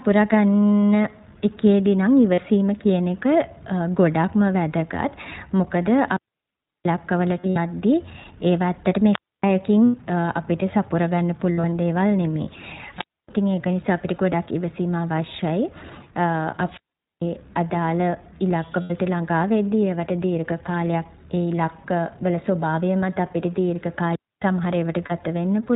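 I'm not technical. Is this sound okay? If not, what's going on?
No, there are three problems, two of them coming and going.

First, the whole clip has gone through the iLBC codec, a low-quality internet-calling format. Everything above about 4 kHz is gone, so the speech sounds boxed-in and muffled. It has a plainly audible rough, slightly robotic edge, because the format rebuilds the voice from a simplified model in short chunks rather than sending the real sound. It's there from start to finish, so it's a sound quality you'll notice the whole way through.

Second, there are lost iLBC frames: little bits of the stream never arrived, and the player covered the gaps by repeating the last scrap of voice with some noise mixed in. You'll hear brief buzzy or breathy smears. They come at 2.34 s (very short) and around 9.85–9.95 s. Just before "ළඟා වෙද්දි", at 18.82–18.92 s, there's another, and at 25.06 s there's a short one. 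Two stretches are patchier, with several small losses scattered around 7.40–7.58 s and 11.52–11.72 s. Each time, the voice snaps back right after.

Third, there are three wireless microphone squelch dropouts. The radio mic's signal weakened until the receiver muted itself, so you get a quick burst of hiss, then near silence, then the voice returning. The longest runs from 5.99 to 6.97 s, with about 0.7 s of silence. Another runs from 16.65 to 17.25 s, silent for under half a second. The shortest is 12.94–13.29 s, about a quarter second, just before "ඉතින් ඒක නිසා අපිට".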